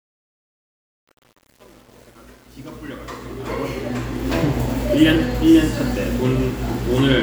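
From the start to 4.34 s, the quiet opening of the fade-in sounds gritty, worst up to 3.94 s. This is truncation distortion on a fade: the level stage, which sounds like it keeps only 8 bits, adds no dither, so low levels collapse into coarse square steps.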